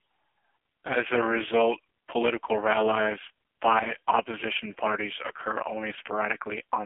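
The speech has been carried through an AMR narrowband mobile codec for its full length, and the heavy coding damage fits AMR-NB's lowest mode, around 4.75 kbps. Encoding at 8 kHz and rebuilding each 20 ms frame from a vocal-tract model with only a few pulses leaves the voice buzzy and synthetic. The band is squeezed to roughly 250 Hz to 3.4 kHz, with nothing above 3.5 kHz, so it sounds thin and phone-like.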